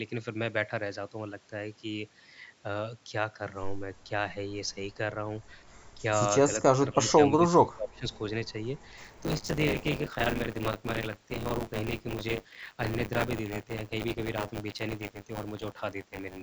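From 6.78 to 8.06 s the speech dips and breaks up, about 30 dB down at worst. This is likely speech suppressed in double talk. From 8.97 s to the end, buffer tearing adds a robotic 100 Hz buzz. Roughly a fifth of each period replays sound from about 20 ms earlier.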